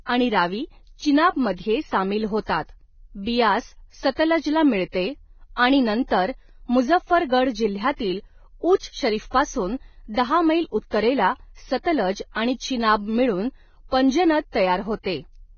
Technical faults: Vorbis compression

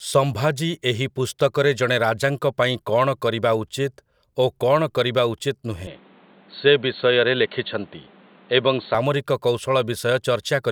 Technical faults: input switched to a poorer device

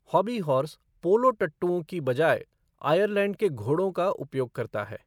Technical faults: clock slip clicks

